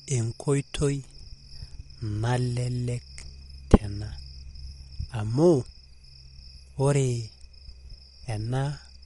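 Throughout the speech, nothing is heard above about 11.1 kHz. The sound is watery and swirly, and s sounds chirp metallically. This is likely MP3 compression that was starved of bits, which fits a low bitrate near 48 kbps. Weak detail flickers between frames.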